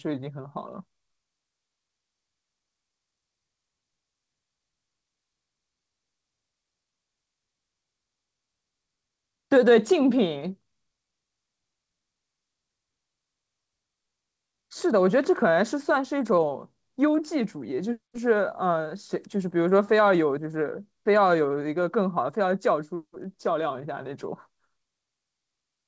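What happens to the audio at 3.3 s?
Nothing goes wrong at 3.3 s: the speech there is intact, carried through the call path with its band ending around 8 kHz, as throughout that connection.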